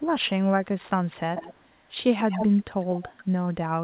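Between 1.36 and 1.6 s, 2.19 and 2.62 s, 2.8 and 2.85 s, and 3.01 and 3.24 s there's echo leak. A copy of the speech trails by 144 ms, likely from a speakerphone echo canceller letting some through. It's loudest around 2.2 s and barely there at 2.8 s.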